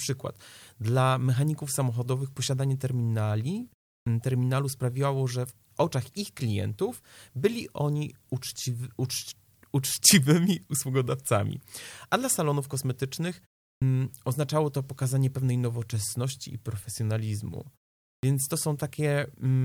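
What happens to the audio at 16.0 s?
Nothing goes wrong at 16.0 s; the speech runs through that moment intact, with no dropout, click or distortion.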